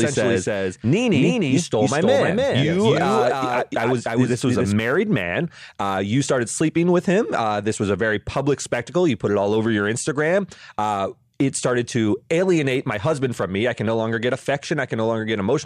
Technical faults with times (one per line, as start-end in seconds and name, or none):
0.00-4.72 doubled audio track